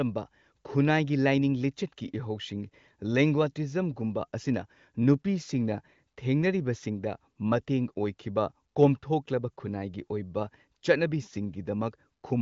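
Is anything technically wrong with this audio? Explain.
No, nothing is technically wrong with this speech. It has the band limit of an AMR wideband (HD Voice) codec, with nothing above 7.5 kHz, and at most faint coding damage, which fits one of the codec's higher rates.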